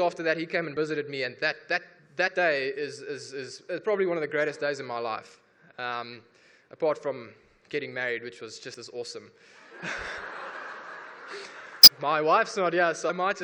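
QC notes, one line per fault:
0.73–0.77, 2.26–2.29, 8.74, 11.83–11.88 s, compressed frames skipped: the sound jumps ahead with a brief blip or click at each join, as whole frames are dropped, losing about 20 ms the first time and about 50 ms at the others.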